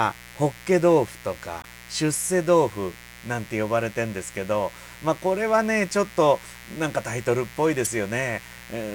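A steady, raspy buzz runs under the speech from start to finish, roughly 20 dB down: mains buzz, where switching spikes at 60 Hz harmonics leak into the signal. Brief glitches at 1.61 to 1.66 s and 7.84 to 7.87 s mark damaged data in a compressed stream; the decoder misreads frames, loses sync and searches for the next frame header.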